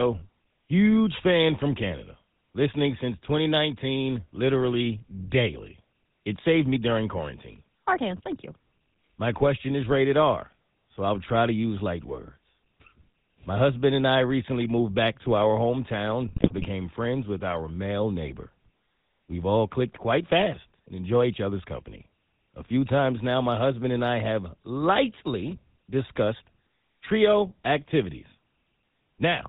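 A speech clip carried through the GSM full-rate codec from start to finish, which fits a 13 kbps stream. The vocal-tract model driven by regularly spaced pulses leaves a buzzy, gravelly roughness, and a spectrogram shows a hard ceiling at 4 kHz with coarse, comb-like harmonics below it. Between 16.28 and 16.65 s, after "back to our hometown" and before "friends with our male", GSM bit errors corrupt the decoded frames, producing squawks, pops and gargling. Damaged filter, pitch and gain values show on the spectrogram as smeared, misshapen frames, and on the waveform as sudden level spikes. The amount of damage points to errors landing in a run of consecutive frames.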